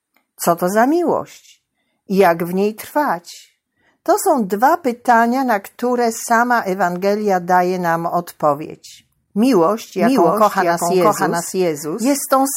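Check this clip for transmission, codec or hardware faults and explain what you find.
One fault appears: a doubled audio track from 9.99 s to the end. A full-band copy, about as loud as the original, trails it by roughly 0.7 s, likely from a second, slower capture path. Unlike echo, it starts abruptly, without decay or room colour.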